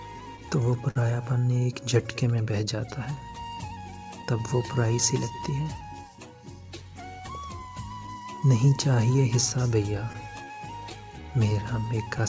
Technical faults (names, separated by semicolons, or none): clock drift between sender and receiver; repeated timing corrections; repeated stalls (stutter); scattered short gaps